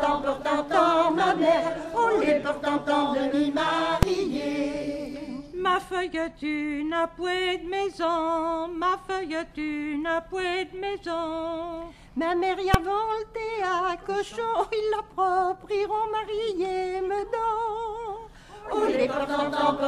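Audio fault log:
4.03 s and 12.74 s, invalid numbers at full scale: a block of about 2.9 ms pinned at one extreme value far beyond the audio's peaks, which fits a 128-sample block, gives one hard bang instead of a brief dropout's quiet gap.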